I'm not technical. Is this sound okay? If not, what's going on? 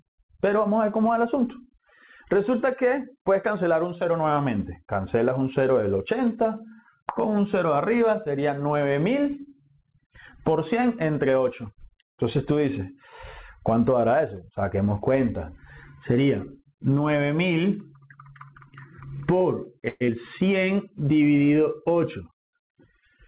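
No. From 19.88 to 20.10 s the sound smears into a fading buzz, then jumps ahead with a small piece missing. This is likely a long network dropout, where the connection briefly stopped delivering audio. It differs from a simple click or gap because the sound is stretched over rather than going silent.

From 21.96 to 22.76 s the audio runs about 6% faster, sounding slightly rushed, yet the pitch stays the same. That is a jitter buffer speed-up, where the receiver trims about a twentieth of a second of accumulated delay. Speeding up a recording would raise the pitch, but this does not.

The call connection also limits the sound to below 4 kHz, which gives it its phone-like quality.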